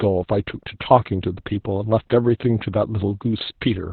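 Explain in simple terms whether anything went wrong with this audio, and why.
Opus voice compression, heavy, runs through the whole clip from start to finish. To save space, the Opus codec kept only the low part of the sound: nothing above about 4.1 kHz survives, so the speech sounds muffled, like an old telephone. It also rebuilds the voice from a rough, simplified model in short 20 ms chunks, and that coarse rebuilding is what makes the speech sound hoarse and slightly robotic.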